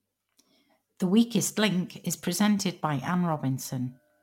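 From start to finish, the converter's sampling clock wanders, so each sample is captured a little early or late at random, on the order of a few microseconds. This is sample clock jitter, and the timing error becomes an amplitude error wherever the speech waveform changes quickly. The result is a faint hiss and grainy roughness, roughly 30 dB below the speech, that swells on loud and sibilant, high-frequency sounds and disappears in the pauses.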